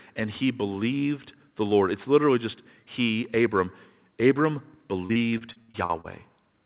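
From 5.06 to 6.07 s, just after "just he abram abram", repeated packet loss makes the speech choppy and robotic. Ten gaps, the longest 64 ms, are patched by repeating earlier sound, concealing about a third of the span. A spectrogram shows smeared, stuttering blocks and abrupt breaks.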